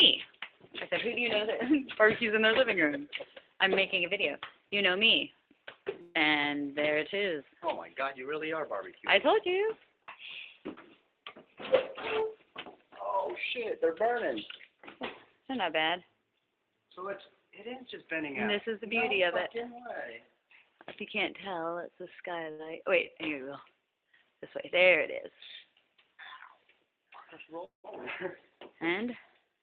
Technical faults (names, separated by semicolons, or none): burst of packet loss; short concealed packet loss; long network dropout